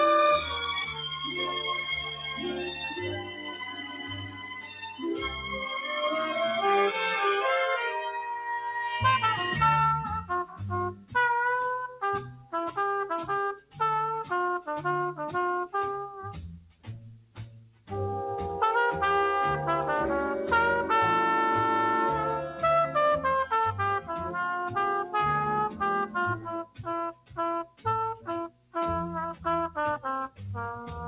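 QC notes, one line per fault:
Throughout: noise suppressor applied to music or sounds. A suppressor tuned for speech stays active on this material. It treats held tones, ambience and reverb as noise and pulls them down. Level swings by around 10 dB as it engages and lets go. Onsets pass, but sustains and tails sink, so the sound pumps and thins. The band also stops near 4 kHz, which fits a G.711 mu-law call path at 64 kbps.
0.44–5.48 s, 8.37–8.72 s, 10.45–11.15 s, 11.91–12.53 s, 13.57–13.79 s, 16.57–17.91 s, 25.69–28.75 s: sound cut by the noise suppressor. In these spans the suppressor judges the sound as noise and ducks it harder. Drops reach about 11, 5, 13, 13, 16, 17 and 17 dB in turn. The first span stays low for about five seconds. The last two lose roughly a second and a half each. Steady and fading parts sink while sharp attacks survive.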